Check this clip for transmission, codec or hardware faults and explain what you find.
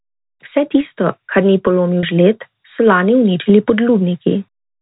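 One transmission fault appears. Packet loss with pitch repetition runs from 2.01 to 2.03 s, between "tisto kar ni" and "žled so lani uničili". About 30 ms of audio went missing, which fits three 10 ms packets. The receiver bridged the gap by repeating the last pitch period, so the sound briefly holds with a slight buzzy sustain before continuing. The G.711 A-law telephone coding carrying the clip adds at most faint quantisation noise.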